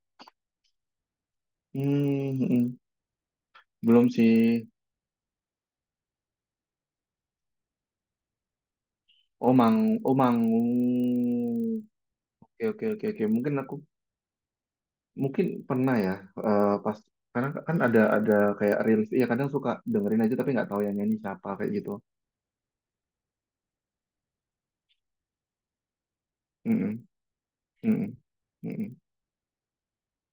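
Throughout the clip, a resampler restarted on every block converts the speech from 24 kHz to 48 kHz in isolated 40 ms chunks, so at each chunk boundary the interpolation filter lacks the true neighbouring samples and leaves a small error. These errors recur 25 times per second, producing a low, rough buzz at 25 Hz riding on the speech. It rises and falls with the signal and disappears in the pauses.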